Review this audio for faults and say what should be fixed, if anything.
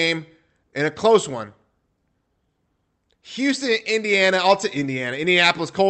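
Nothing here needs fixing; no faults can be heard.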